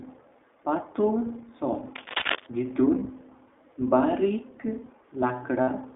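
iLBC codec, throughout: the speech sits in a narrow line band of roughly 250 Hz to 3.6 kHz, with plainly audible rough, slightly synthetic coding texture. This fits iLBC's 15.2 kbps mode, which codes each 20 ms frame independently of the one before.

Cable scratch noise, 1.93 to 2.47 s: dense, uneven bursts of scratchy rustling ride over the speech, nearly as loud as the speech itself. The likely cause is a worn cable or connector being moved, its contact resistance jumping rapidly and injecting noise.

Lost iLBC frames, 2.18 to 2.24 s and 5.62 to 5.70 s: gaps of 40 ms and 60 ms, consistent with two and three dropped 20 ms frames, are filled by the decoder repeating the last pitch cycle mixed with noise. Each sounds like a brief, buzzy held vowel, and the speech recovers almost at once.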